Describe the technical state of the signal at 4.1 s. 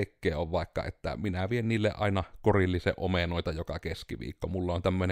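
At 4.1 s the speech signal is intact, with no dropout, clipping, glitch or other fault audible at that point.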